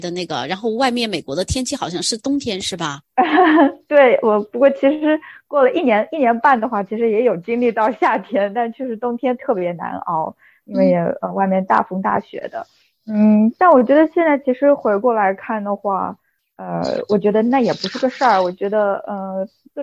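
No technical faults can be heard anywhere in the clip. Nothing in the audio breaks, jumps or drops out at any point.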